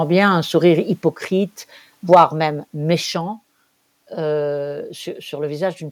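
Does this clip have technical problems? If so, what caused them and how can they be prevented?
Yes. Right after "bien un sourire", at 1.02 s, the speech and background fall together by about 3 dB in one clean step, a microphone volume stepped down, likely by the call software's automatic gain control. Unlike a gradual fade, the level shifts instantly and stays lower. Turning off automatic microphone adjustment and setting a fixed, moderate input level prevents it.

From 2.12 to 2.23 s the loudest syllables turn harsh and crackly. That is likely microphone overload: the peaks push about 5 dB past the converter's limit, flattening roughly one sample in twenty. The software then likely lowers the volume again by about 3 dB at 2.14 s. Unlike the step-down, this fault adds distortion rather than just reducing level. Lowering the input volume in advance so peaks stay below full scale prevents it.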